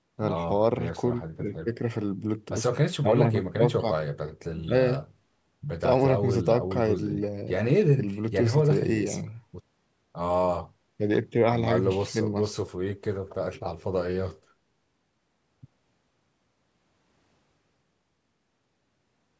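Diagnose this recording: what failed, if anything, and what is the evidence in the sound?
Nothing failed in this speech recording, and no stage of the chain leaves a fault audible in the sound. What can be heard is the normal call microphone processing, with the lowest bass trimmed and no content above 8 kHz.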